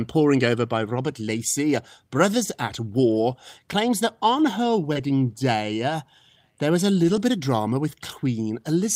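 At 4.93–4.97 s, between "claims that on her" and "day uh there was", a short concealed packet loss briefly smears the sound. About 20 ms never arrived, and the decoder extended the preceding sound to fill it. On a spectrogram this shows as the preceding sound stretched smoothly across the gap, and the waveform shows no break. Within the same moment, at 4.95–4.97 s, a lost packet was rebuilt from error correction.

Lost packets rebuilt from error correction recur at 7.03–7.21 s, between "uh there was a" and "bit of drama", and again at 8.11–8.13 s, after "bit of drama". The decoder played low-bitrate backup copies of the missing packets, so nothing drops out. Instead, these stretches sound rougher and grainier, and a spectrogram shows patches of noisier, less detailed texture at those times.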